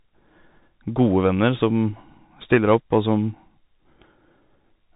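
Speech throughout carries Bluetooth CVSD headset codec damage: nothing above 3.8 kHz, scratchy s sounds, slope-overload distortion on loud highs, and granular hiss, consistent with a 64 kbps link.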